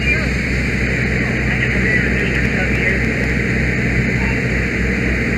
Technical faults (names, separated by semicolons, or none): train of clicks